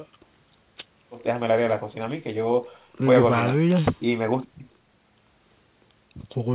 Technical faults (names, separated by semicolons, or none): none